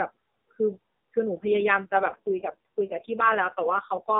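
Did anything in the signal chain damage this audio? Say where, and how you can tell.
Yes: from 1.34 s, an AMR rate drop in the network, fitting 12.2 falling to 4.75 kbps, makes the speech buzzier and synthetic, with the same band and no gap.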